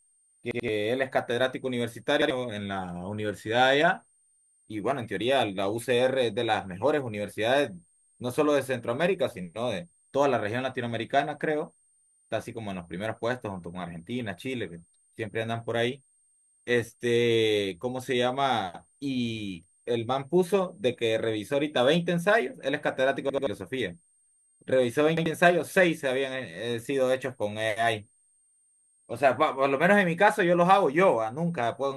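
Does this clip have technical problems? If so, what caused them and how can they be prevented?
Yes. A switching supply whistle sits throughout, drifting between 8.6 and 8.8 kHz about 35 dB below the speech. Its wandering pitch, unlike fixed mains hum, points to a power supply in burst mode. Using a linear or better-filtered supply prevents it.

Repeated buffer stutters occur at 0.51–0.68 s and 23.30–23.47 s (two extra plays each), and at 2.22–2.30 s and 25.17–25.26 s (one each). Each repeated 85.33 ms piece fits a 4096-sample buffer. Unlike a dropout, the same piece is heard again rather than as silence. A larger playback buffer or lower system load prevents this.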